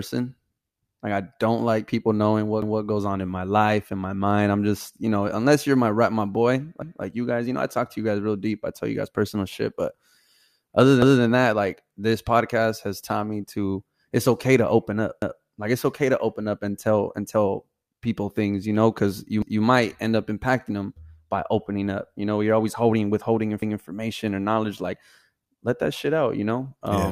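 A 200 ms stutter, where sound plays twice, recurs at 2.62, 6.82, 11.02, 15.22, 19.42 and 23.62 s, for example after "my rep my boy". These are overlapping chunks: each 4 s block restarts slightly before the previous one ended.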